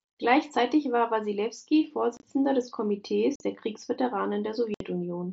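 Speech with unconcealed Bluetooth headset packet loss: abrupt silent holes at 2.17–2.23 s (broken up over about 60 ms), 3.36–3.40 s and 4.74–4.81 s, left unfilled, unlike concealed loss, which smooths over gaps. The wideband headset sound up to 8 kHz fits an mSBC link.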